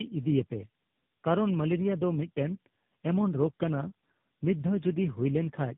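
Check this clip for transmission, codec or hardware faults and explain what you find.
The clip has one fault, present throughout: tandem speech coding. The speech sounds like it was decoded and re-encoded by about three low-rate speech coders in a row, consistent with AMR-NB and GSM full rate joined by plain telephone links. Each coder modelled errors left by the one before, so the damage compounds. The result is rougher, more muffled and more warbly than a single coder would produce, with nothing above 3.8 kHz.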